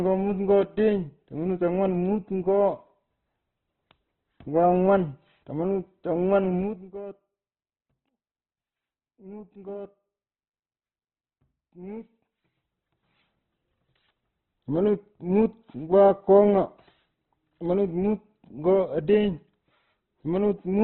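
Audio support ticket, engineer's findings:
Whole clip: speech sounds grainy and rough, with nothing above 4.1 kHz. Likely Opus compression in CELT mode, starved for bits. The encoder fills bands with folded or noise content rather than leaving holes, so you get a narrowband, gritty texture, which fits a very low bitrate around 12 kbps.

6.55 to 6.91 s: ticking/zipping riding on the speech while the level drops by roughly 20 dB. Zipper noise from a gain stage stepping in 1 dB increments, around fifty steps a second, no smoothing, so each jump leaves a small click.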